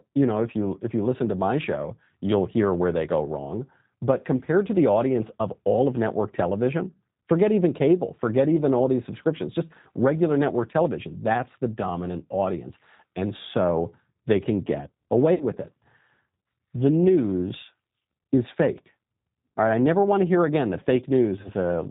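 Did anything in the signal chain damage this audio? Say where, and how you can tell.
Yes. Throughout the speech, the codec stage has left plainly audible G.729 codec damage. Nothing reaches above 4 kHz, and the voice has a rough, slightly synthetic grain. That grain comes from the decoder rebuilding each frame from a vocal-tract filter, a pitch predictor and a few pulses, a pattern that fits G.729A at 8 kbit/s. A simple telephone band-limit would sound dull but natural. This sounds artificially resynthesised as well.

The network stage adds VoIP packet loss concealed by the speech codec, at 15.34 to 15.44 s (60 ms lost, which fits two packets) and at 21.41 to 21.48 s (30 ms, which fits one). At each point the sound smears into a fading buzzy tone or coloured noise rather than breaking into silence. Once audio returns, the voice stays weak for a short time, because each frame is predicted from the corrupted one before it. 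A plain dropout would instead leave a hard gap followed by a clean restart.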